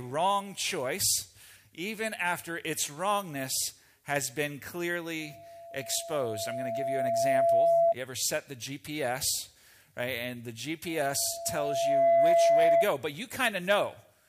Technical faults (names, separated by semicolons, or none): loudspeaker feedback squeal